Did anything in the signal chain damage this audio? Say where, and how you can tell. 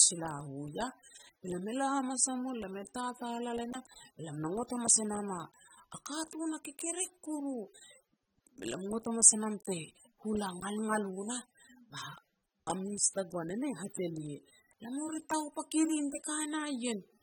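Yes. The damage sits at the codec stage and runs through the whole clip. The speech carries plainly audible coding damage from start to finish, and nothing is present above 19.3 kHz. That pattern likely comes from AAC compression, specifically AAC-LC. The encoder splits each frame into frequency lines and quantises them coarsely where a hearing model predicts masking. The level of degradation fits a bitrate somewhere around 27 kbps, too little to code speech cleanly.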